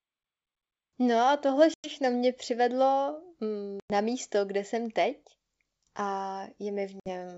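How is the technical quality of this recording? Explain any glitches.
The recording has three dropouts from packet loss on an ADPCM call, heard over G.722 wideband coding at 64 kbit/s. They fall at 1.74–1.94 s, 3.80–3.91 s and 7.00–7.10 s. The first two remove about 100 ms of speech, which fits roughly five packets. The last removes about 60 ms. Each gap is hard-edged silence. The decoder's predictor and step size then lose track of the sender's. So speech resumes slightly distorted before settling.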